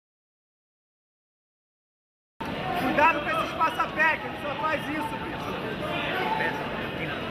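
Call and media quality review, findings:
Dead silence from 0.00 s to 2.41 s, already in progress at clip start. No room tone or noise floor, then sound enters abruptly mid-flow. Audio dropout to silence: likely input loss (disconnected device, failed link or stray mute) while the recorder kept writing silence. Material from that span unrecoverable.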